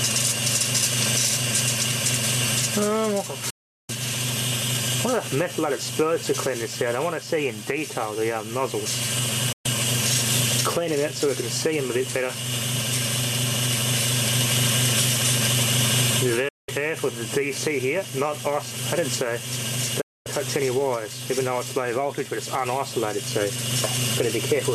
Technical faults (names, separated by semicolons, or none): digital broadcast dropout